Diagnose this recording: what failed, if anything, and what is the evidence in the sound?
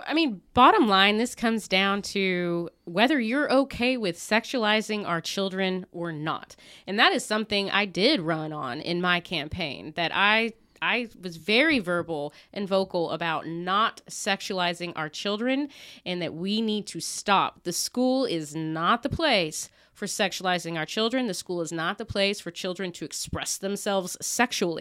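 Compressed frames skipped in the codec stage: the speech jumps ahead at 7.73 s and again at 21.69 s. The loss sounds like one 23.2 ms frame, dropped or rejected by the decoder.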